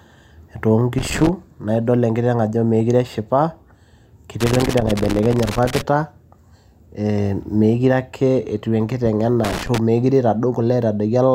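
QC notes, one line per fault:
0.98 to 1.29 s: loose connector crackle. A short, irregular burst of scratching cuts into the speech. A worn or dirty contact is making and breaking as it shifts, so the signal chops in and out.
4.40 to 5.82 s: loose connector crackle. This is the longest run, at about 1.4 s. The crackle is ragged and uneven.
9.44 to 9.78 s: loose connector crackle. A brief, rough burst of crackle returns as the connection flickers again.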